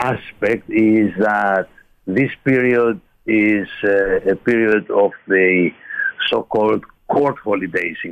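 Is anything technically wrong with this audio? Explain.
Yes. Input switched to a poorer device, from 4.72 to 6.28 s: the sound abruptly narrows, with nothing above 3.4 kHz, so it turns dull and boxy, then opens up again at 6.28 s. The likely cause is the input changing mid-recording to a lower-grade microphone or a headset's call profile, which passes a narrower band. There is no gap at either switch and the level stays about the same, but a faint new background noise sits well below the signal while the poorer input is active.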